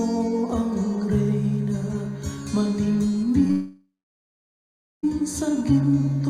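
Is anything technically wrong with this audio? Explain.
Yes. At 3.47 to 3.51 s there is a short concealed packet loss. About 20 ms of audio arrived too late to decode, and the receiver covered the gap by extending the preceding sound before blending back in. The result is a brief smear or wobble, with detail in that span lost.

Straight after, from 3.51 to 5.05 s, the sound breaks off in what is likely a long network dropout. The concealment continues the last sound as a fading buzz or hiss, then about 1.13 s of silence follows before the audio resumes with the missing stretch gone.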